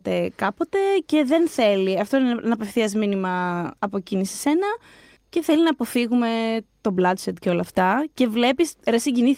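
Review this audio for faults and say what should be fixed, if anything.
Nothing needs fixing, as the speech signal shows no technical faults at any point.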